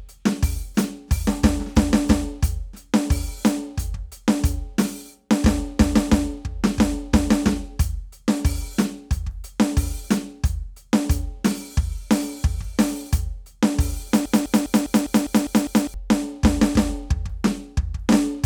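A broken-record loop runs from 14.26 to 15.94 s: a 0.2 s fragment of the music repeats exactly eight times back to back, likely because playback or the stream stalled and kept resending its last buffered piece, so the music meant for that stretch is lost.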